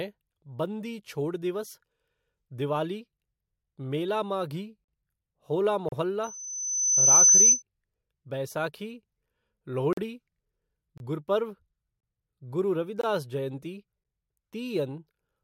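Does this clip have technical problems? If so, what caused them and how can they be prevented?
Yes. Gaps between stream segments at 5.89, 9.93, 10.98 and 13.01 s cut 22 to 43 ms of hard-edged silence, visible as flat-line waveform notches. This fits one-second segments with mismatched timestamps. Prevent it by keeping segment timestamps contiguous when packaging.

Loudspeaker feedback squeal from 6.23 to 7.63 s: a 6.1 kHz tone swells over about a second to well above the speech, a bright horizontal spectrogram line. Prevent it by lowering monitor gain, notching 6.1 kHz, or moving the microphone away from the loudspeaker.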